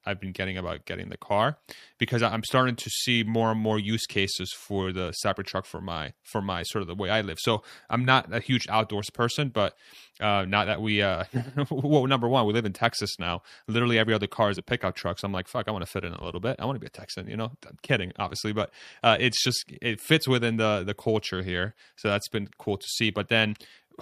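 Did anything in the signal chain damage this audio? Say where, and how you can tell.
No, no fault is audible.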